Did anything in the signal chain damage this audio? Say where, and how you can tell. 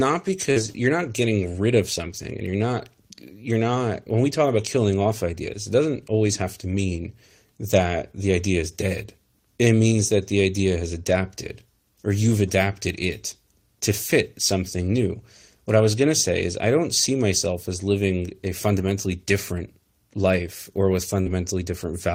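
Yes, the network leg of the call damaged it. Short concealed packet loss appears at 0.51 to 0.58 s and 21.22 to 21.28 s. About 40 ms went missing each time, and the decoder extrapolated the last sound across the hole, giving a brief smear or wobble rather than the rough grain of a rebuilt frame.

A lost packet rebuilt from error correction shows up as short rough, noisy patches with no gap. They fall at 0.56 to 0.66 s (60 ms), at 5.06 to 5.12 s just after "we talk about killing" (40 ms), at 15.02 to 15.04 s after "it to fit something" (20 ms), at 18.78 to 18.92 s (80 ms), and at 21.26 to 21.32 s after "different life or with" (40 ms). Here the decoder played the low-bitrate Opus copy carried in the following packet. That keeps the real content but coarsens it, whereas concealment invents continuation.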